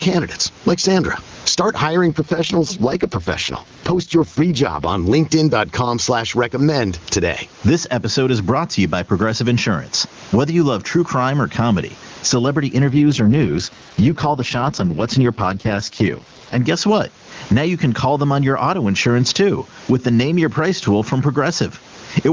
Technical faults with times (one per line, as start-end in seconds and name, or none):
0.00-22.33 gain pumping
2.08-4.88 AMR rate drop
12.90-16.58 AMR rate drop